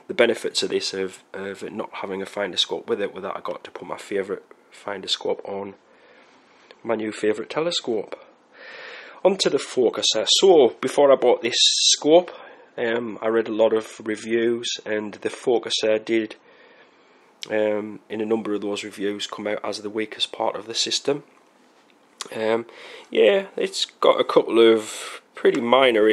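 At 5.21 s the sound switches abruptly to an adaptive stream at a lower bitrate, with no gap, and stays there until 17.21 s. The player evidently fell back to a cheaper encoding for those 12 seconds, and the rise in codec artefacts fits a drop from roughly 128 to 32 kbit/s MP3. The treble disappears above 12.2 kHz, and on a spectrogram the upper band is cut off flat across that span, with sharp vertical edges at both switch points.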